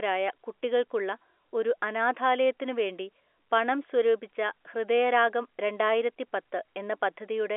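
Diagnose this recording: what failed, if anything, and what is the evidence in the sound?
Nothing failed: the speech sits inside a telephone band of roughly 300 to 3400 Hz with nothing above 3.8 kHz, which fits ordinary G.711 A-law telephone coding at 64 kbps, and that coding leaves at most a faint trace on the signal.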